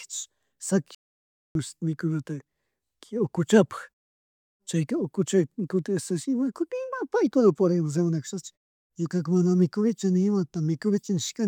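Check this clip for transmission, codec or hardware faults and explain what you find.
One fault turns up in this speech clip, a playback stall. From 0.95 to 1.55 s the sound cuts out mid-flow for about 0.6 s, then resumes. The likely cause is the player running dry of buffered data or its thread being blocked, leaving the output silent until it recovered.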